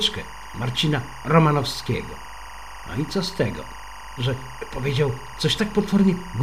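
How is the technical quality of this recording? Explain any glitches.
The recording is marred by one persistent fault. From start to finish, a steady chirping warble sits behind the sound, roughly 15 dB below it. This is timecode bleed: linear timecode, a square wave flipping between tones around 1 and 2 kHz, leaking from an adjacent track or cable. Its rhythm fits 23.976 fps code.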